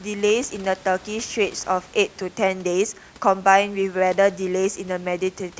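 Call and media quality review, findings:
No system faults found in the speech; room noise sits about 25 dB below the talker and belongs to the recording environment.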